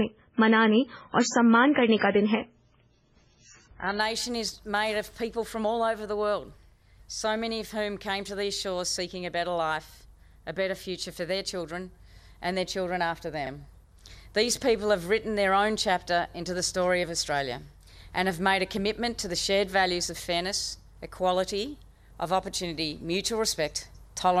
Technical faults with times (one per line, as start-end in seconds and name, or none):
0.00-4.00 adaptive stream starting at a low bitrate